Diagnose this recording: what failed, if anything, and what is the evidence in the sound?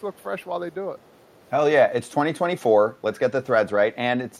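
A faint delayed copy of the speech sits far below the main level from 0.0 to 0.46 s and again from 1.31 to 1.48 s, about 456 ms late. This is echo leak, likely from a far-end echo canceller in call processing. Unlike room reverberation, it is a distinct late repeat, not a smeared tail.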